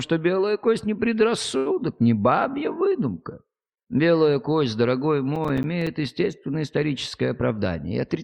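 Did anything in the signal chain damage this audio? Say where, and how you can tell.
Yes. Three faults, two from the jitter buffer and one from the driver and buffer stage.

At the network and jitter-buffer stage, a short stall from a late packet occurs from 1.57 to 1.68 s. A packet arrived late and the buffer ran dry, so the receiver held the last sound for about 83 ms until the packet turned up and then resumed from the same point. Nothing is lost, but that moment is stretched, with a faint buzz or dip, and everything after it sits about 83 ms later.

In the driver and buffer stage, processor overload crackle runs from 5.36 to 5.87 s. The processor missed a run of deadlines on small buffers, which fits buffers of roughly 5 ms, with around ten of them failing, and each missed buffer came out as silence. Those short hard-edged gaps pile up into a gritty tearing crackle over the sound that stops once the load eases.

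Back at the jitter buffer, a jitter buffer speed-up runs from 7.41 to 8.22 s. The buffer was holding more audio than its target, so the receiver cut out short pitch-period slices over and over, removing roughly 70 ms in total. Playback runs at about 107% speed with no change in pitch, so that last stretch sounds slightly hurried.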